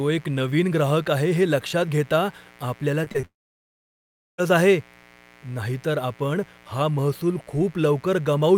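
Speech runs over a steady, raspy mains buzz built on 60 Hz harmonics, sitting roughly 30 dB below the voice, from a dimmer, rectifier or poor shielding. Short concealed packet loss hits at 3.04, 3.12 and 3.20 s. Each time about 20 ms never arrived, and the gap was patched by extending the previous sound, leaving brief smears. Right after, from 3.25 to 4.40 s, the audio goes almost silent for about 1.1 s, following a short fading continuation. That points to a long network dropout as the likely cause. The speech then resumes with that stretch missing.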